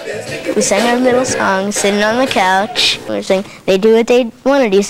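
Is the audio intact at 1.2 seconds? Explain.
Yes, at 1.2 seconds the audio is intact, with no dropout, click, distortion or other fault at that moment.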